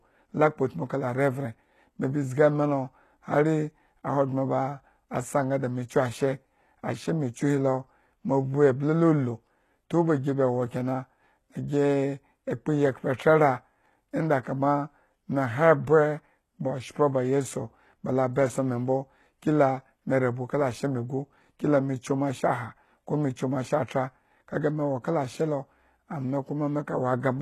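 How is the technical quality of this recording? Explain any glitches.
Technical quality is poor. Codec damage is plainly audible across the whole speech recording.

Throughout, the sound points to HE-AAC compression, likely at a very low bitrate near 16 kbps. Treble is rebuilt by copying lower bands upward. Nothing remains above 12.3 kHz. S sounds turn gritty and metallic.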